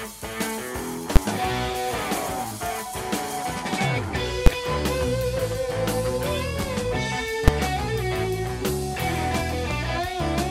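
At 1.16 s, 4.46 s and 7.48 s, single loud bangs mark invalid numbers at full scale: broken calculations pinned whole blocks (about 11 ms, fitting 512 samples, then about 5 ms) at maximum level, unlike clipping, which follows the sound.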